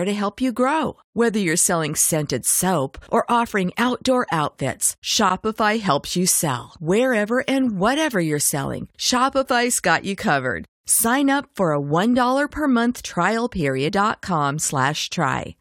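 At 13.87 to 13.89 s, just after "per month trial", the speech jumps abruptly forward with a brief blip, so part of the programme is missing. This is likely a stream segment skipped: one segment failed to load and playback resumed from the next.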